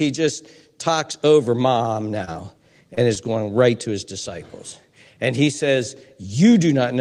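At 1.83 to 1.87 s there is a short stall from a late packet. The jitter buffer ran dry, so the receiver held the last sound for about 16 ms and then resumed exactly where it left off. Nothing is lost, only stretched with a faint buzz or dip, and everything afterward runs 16 ms later.

At 2.25 to 2.29 s, 2.33 to 2.37 s and 2.95 to 2.99 s comes short concealed packet loss. Each time, 20 ms of real audio never arrived and was replaced by an extrapolated continuation, heard as a brief smear or wobble. Unlike the stall, these spots lose real audio rather than delaying it.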